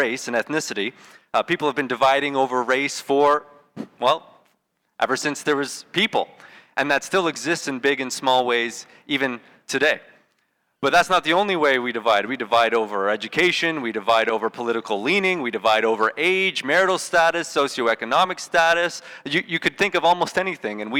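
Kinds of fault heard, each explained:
Hard clipping: a stage in the chain was overdriven by about 10 dB, so peaks above its ceiling were cut flat. Under one percent of samples reach that limit, but throughout the clip the flattened tops add high harmonics, heard as crackle on loud moments.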